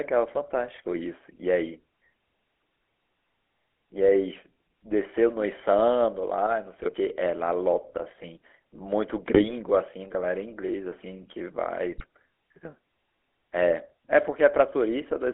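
Throughout, the GSM full-rate codec gives a buzzy, gravelly roughness within a 300 Hz to 3.4 kHz band, consistent with a 13 kbps full-rate coder. GSM bit errors at 6.74–6.95 s, 9.33–9.54 s and 11.92–12.05 s corrupt the decoder's filter, pitch and gain values, producing squawks, pops and gargling.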